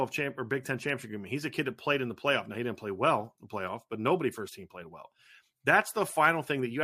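Nothing technically wrong turns up anywhere in this speech recording, so there are no problem spots or causes to point to.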